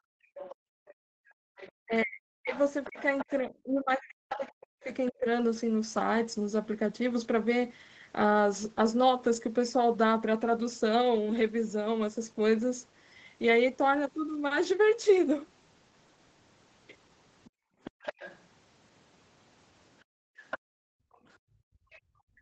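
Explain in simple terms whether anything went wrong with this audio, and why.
Background gated by the echo canceller, at 0.00 to 1.56 s, 17.50 to 18.03 s, and from 20.04 s to the end: while the far end's sound was playing through the loudspeaker, the echo canceller turned the microphone down hard. The room sound drops almost to silence, then returns once the canceller lets go.

Other side's voice leaking through, at 0.35 to 5.11 s, 17.44 to 18.39 s, and from 20.5 s to the end: a second, fainter voice can be heard under the talker. It is weak at first and grows stronger toward the end. This is likely loudspeaker sound that the echo canceller failed to fully remove from the microphone.

Speech suppressed in double talk, at 1.84 to 5.26 s and briefly around 22.2 s: the talker's voice dips sharply and cuts out in pieces. This likely happened because both sides spoke at once, and the canceller, unable to separate them, turned everything down.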